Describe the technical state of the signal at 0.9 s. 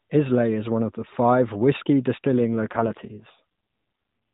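At 0.9 s the speech is intact, with no fault present; it carries the narrowband ceiling of the AMR narrowband mobile codec, with nothing above 4 kHz and only light coding colour.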